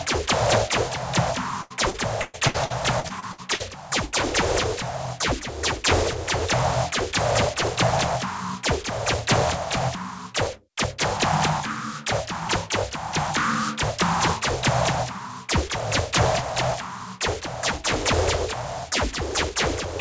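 Repeated packet loss (robotic sound) runs from 1.62 s to 3.62 s. Over those two seconds the stream drops out ten times, about 0.56 s missing in total, with the longest hole 119 ms. Each gap is bridged by stretching the last received sound, so about 28% of the stretch is synthetic fill. The audio turns choppy, with pieces missing. Nothing is present above 8 kHz, which points to a wideband call codec such as G.722.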